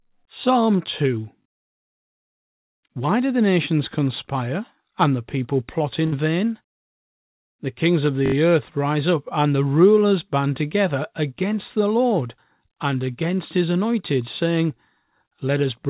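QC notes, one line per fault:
1.42–1.46 s, repeated buffer: a 20 ms piece of sound plays twice more with a hard join at each repeat, heard as a brief buzzy stutter. Fresh audio arrived late, so the device replayed its last buffer, which fits a 20 ms buffer. No audio is skipped.
6.06–6.14 s, burst of packet loss: just after "and the people plot", about 60 ms of audio never arrived in time. The receiver stretched the last sound for roughly 58 ms while turning it down. Playback then resumes further on with that stretch missing.
8.26–8.34 s, repeated buffer: between "kings of" and "earth rise up and", one 20 ms buffer is replayed four extra times, producing an 80 ms stuttering buzz with hard joins. The input arrived late and the device re-sent its last buffer, in the G.711 band-limited sound that stops at 4 kHz.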